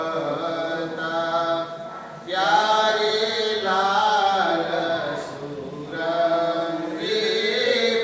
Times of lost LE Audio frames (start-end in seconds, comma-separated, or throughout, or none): none